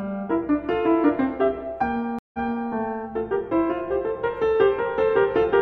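At 2.19 s the music stops dead. This is a stream reconnect: the connection dropped, the player fell silent, then rejoined and started a new decoder partway through the stream. The gap lasts about 150 ms. Playback resumes about 0.37 s earlier than where it broke off, so a short stretch of music repeats. The server resent a burst of recent audio. The disturbance settles by 2.71 s.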